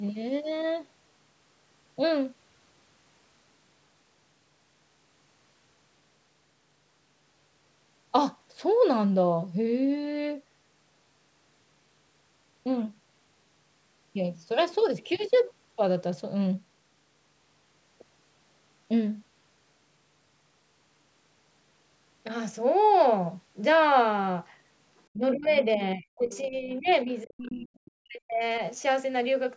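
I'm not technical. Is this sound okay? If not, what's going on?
No. From 25.14 to 28.42 s, about three seconds, the speaker's voice sinks and breaks up, at its worst nearly to silence. This is speech suppressed in double talk. The likely cause is both people on the call talking at once, so the call's echo remover couldn't tell this voice from the other person's voice on the loudspeaker and turned everything down. Unlike a bad connection, which drops sound at random, this dip is tied to that overlap.

Inside that same stretch you can hear short scraps of a second voice, from 25.42 to 25.59 s, 26.34 to 26.46 s, 26.88 to 26.94 s and 27.46 to 27.51 s. Each scrap is fainter than the one before. This is the other side's voice leaking through, likely the far person's voice coming out of the speaker's loudspeaker and not fully removed from the microphone. It is a different voice, not an echo of the speaker repeating itself.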